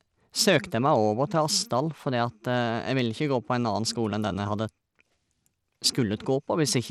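Throughout the clip the speech has likely passed through Bluetooth SBC compression at a small bit pool, consistent with roughly 96 kbps. The codec's simple bit allocation starves the weaker upper sub-bands and quantises the rest coarsely. Nothing remains above 16.9 kHz, and the treble below that thins and flickers rather than holding steady. A gritty, grainy noise and aliasing ride on the speech from start to finish, plainly audible rather than subtle.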